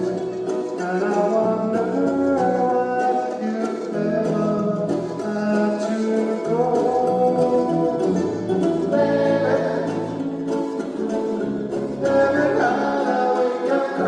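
From 10.28 s to 13.13 s a call bitrate drop makes the sound coarse and watery. The sound points to the encoder being starved of bits, from around 96 kbps down to roughly 22 kbps, and held at that floor for about 2.8 s before quality returns. Unlike packet loss, there are no gaps, repeats or clicks. The audio runs continuously but degraded, then recovers once the bandwidth estimate climbs back.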